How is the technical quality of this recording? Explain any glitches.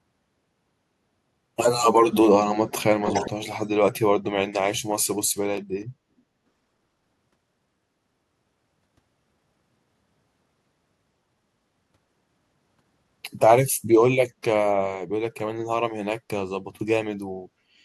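The recording has one clear glitch, an echo leak between 3.04 and 3.47 s. During that stretch a second copy of the speech trails the original by about 0.42 s, only a little quieter than the direct voice. This is likely a far-end loudspeaker whose sound reached the microphone and slipped past the echo canceller. Room reverberation would add a smeared tail right behind each syllable, but this is a distinct repeat arriving after a noticeable gap.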